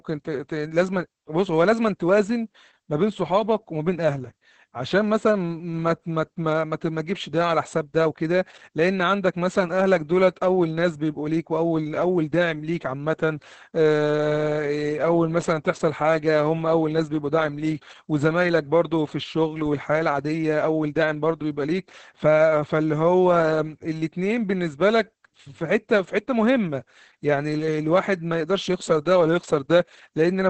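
Opus voice compression runs through the whole clip. The band is cut off at 8 kHz and the excitation is coded coarsely, which fits the SILK linear-prediction coder at around 10 kbps. The speech sounds muffled, hoarse and slightly robotic from start to finish.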